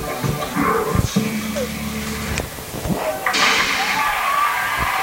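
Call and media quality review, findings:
Low bit depth with dither, throughout: constant even hiss, no distortion, roughly 15 dB below signal. 6-bit quantisation with dither turns rounding error into steady white noise.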